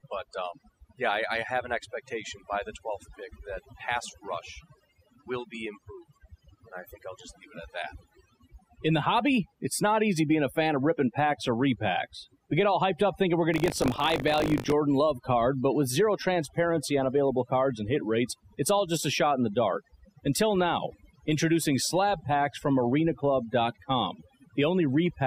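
From start to finish the speech carries overdone noise removal: a noise reducer set too aggressively has pushed individual frequency bands down or out wherever they sat close to its noise estimate, taking quieter parts of the voice with them. The background drops and breaks up into scattered twinkling specks. Unlike plain low-pass dulling, the damage fluctuates band by band, which causes the metallic shimmer.

From 13.52 to 14.73 s there is buffer tearing. The writing and reading sides of a ring buffer have drifted until they cross inside each period, so about a tenth of every buffer is replayed audio from around 40 ms earlier, butted against the current sound with hard joins. The result is a robotic 50 Hz buzz, which fits a 20 ms period, heard only while the voice is present. Dropouts would leave gaps. Here, the stale material repeats on a steady cycle.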